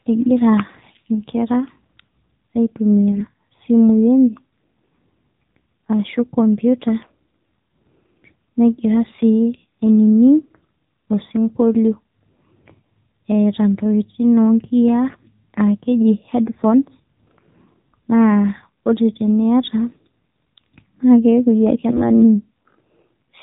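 The whole clip passes through the AMR narrowband mobile codec. Nothing above 4 kHz survives, so the speech sounds thin and boxed in. The voice model runs short of bits. It comes out plainly buzzy and synthetic, which fits the 7.4 kbps mode.

AMR bit errors strike three times: 3.12 to 3.23 s, 15.08 to 15.30 s just after "oo nkiya", and 21.90 to 22.08 s. A few percent of the weakly protected bits flip. Pitch and level hold, but the voice turns briefly hoarse, scratchy and gargly.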